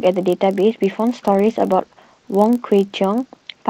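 Speech, carried over a call path using Opus with audio bandwidth limited to about 8 kHz, with two faults. The first runs through the whole recording: a steady buzz at about 43.1 Hz from a block size mismatch (padded). One stage delivers blocks slightly shorter than the next stage reads, which fits a 1024-sample read block, and the shortfall in each block is filled with zeros. That short silence repeats once per block, producing the buzz at the block rate. The mismatch is small, so the audio runs at 0.999 of its normal speed, and the slowdown and any pitch change are negligible. The second fault starts at 1.27 s and continues to the end. It is a call bitrate drop from 32 kbps to 17 kbps, likely triggered by a fall in the call's bandwidth estimate. At that point the encoder quantises more coarsely, and the speech turns rougher and more watery.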